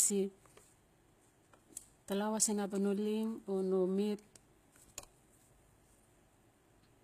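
Speech carrying plainly audible damage throughout, with s sounds gritty and metallic, most likely from HE-AAC compression at a rate that points to around 20 kbps. A spectrogram shows smeared, copied-looking treble bands above a crossover and nothing above 14.9 kHz.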